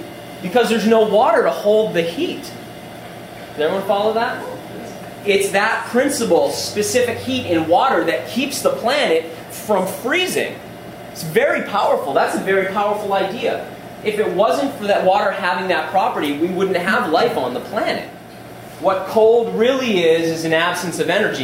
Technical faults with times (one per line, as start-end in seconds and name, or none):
none